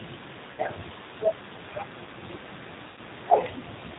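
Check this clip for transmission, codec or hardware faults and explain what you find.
Two faults are audible: plainly audible low-bitrate codec coding throughout the speech, and two short gaps concealed by the decoder.

G.729 codec, throughout. The speech is rebuilt from a vocal tract filter, a pitch predictor and a few pulses per frame, which fits G.729A at 8 kbit/s. The damage is plainly audible: the voice is rough and slightly synthetic. On a spectrogram, nothing appears above 4 kHz, and the harmonics look grainy and smeared rather than clean.

VoIP packet loss concealed by the speech codec, at 0.52 to 0.62 s and 2.88 to 3.00 s. About 60 ms of audio is missing in the first event and about 90 ms in the second, which fits two and then three lost packets. The decoder filled each gap by repeating its last pitch and filter with falling gain, so the speech stretches into a buzzy tone or coloured noise that fades before the voice returns weak. 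On a waveform, the envelope decays smoothly across each gap. On a spectrogram, flat, unchanging harmonic lines appear where the speech movement should be.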